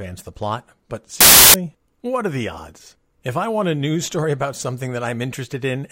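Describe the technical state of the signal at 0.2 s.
The speech signal at 0.2 s is intact, with no audible fault at that moment.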